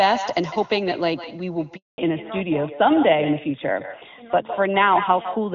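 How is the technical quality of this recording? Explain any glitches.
The recording has three clear problems: an echo through the whole clip, a dropout just before the two-second mark, and a loss of bandwidth from then to the end.

Echo with no canceller runs throughout. The far end's loudspeaker is feeding the speech back into its microphone, and nothing cancels it. A thinner copy, about 10 dB quieter, trails each syllable by roughly 150 ms. On a waveform, each burst has a smaller twin just behind it. On a spectrogram, the striations are smeared rightward.

A handover gap runs from 1.76 to 1.98 s, lasting 220 ms. While the call switched networks, no speech frames arrived. The sound fades within a few tens of milliseconds and then goes silent. On the waveform this is a flat line, and on the spectrogram a clean vertical blank band.

Fallback to narrowband starts at 1.98 s, as the link resumes, and lasts to the end. 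Before the gap, the HD Voice (AMR-wideband) sound carries energy up toward 7 kHz, which fits a high AMR-WB rate. Afterwards nothing remains above 4 kHz, consistent with a narrowband AMR codec. The speech turns duller and rougher, and the spectrogram shows a hard ceiling at 4 kHz.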